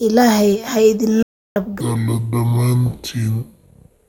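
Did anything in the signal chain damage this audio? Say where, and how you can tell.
Yes. At 1.23 s the speech cuts off abruptly and doesn't return until 1.56 s. That is a gap of about 330 ms of silence, with no room tone underneath, and whatever was said in that span is lost. This audio dropout to silence points to the input stage: the feed was likely interrupted by a link failure, a disconnect or a momentary mute, while the recorder went on writing silence.

From 1.81 s to the end, the speech becomes slow and deep, with pitch and tempo falling together. It plays at about 0.6 times normal speed, roughly ten semitones low. A section at the wrong speed like this, where pitch and timing shift as one, suggests resampling or playback against a mismatched clock. The cause is likely an editing or conversion step that assigned the wrong sample rate to that stretch.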